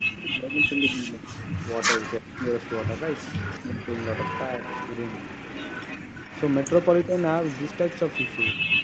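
Speech recorded over a call, with two problems. First, speech suppressed in double talk: the voice dips from 0.0 to 1.33 s (by around 20 dB), 2.19 to 2.51 s (by some 40 dB, nearly gone), 3.64 to 3.82 s (around 20 dB) and 7.06 to 7.14 s (a slight 10 dB or so). These look like sudden notches in the waveform envelope and faded vertical bands on a spectrogram, likely from an echo canceller ducking both talkers while the far side spoke. Second, an echo leak: a faint copy of the voice trails it by about 350 ms, briefly at 0.11 to 0.24 s at roughly 20 dB down, then from 1.38 s to the end at roughly 15 dB down. On a spectrogram this shows as weaker duplicate harmonic patterns shifted right by that delay, most likely loudspeaker pickup the far end's canceller failed to remove, against a spectrum that stops at 8 kHz.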